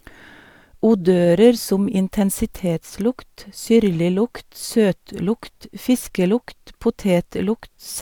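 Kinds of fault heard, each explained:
No technical faults are audible anywhere in the recording.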